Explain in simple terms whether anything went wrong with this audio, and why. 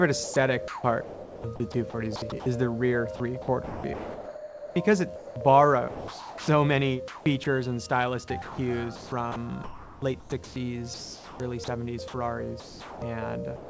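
Sound chopped by the voice detector occurs from 0.24 to 2.46 s, 3.16 to 5.36 s and 8.42 to 13.02 s. The sender's voice detector likely kept switching off and on, so pieces of sound totalling about 1, 1.3 and 2 seconds were swapped for synthetic hiss, making it choppy.

Sound dropped by the voice detector happens at 5.88 to 6.48 s, at 7.44 s, and from 13.56 s to the end. Here the detector likely mistook real sound for background and stopped sending, so steady filler noise replaces the sound until transmission resumes.

Comfort noise in place of the background runs from 7.08 to 7.46 s. During a pause the sender likely stopped transmitting, and the receiver filled the gap with smooth artificial noise instead of the real background, which briefly sounds flatter and featureless. Across the clip, nothing above 8 kHz comes through, consistent with the call codec on this line.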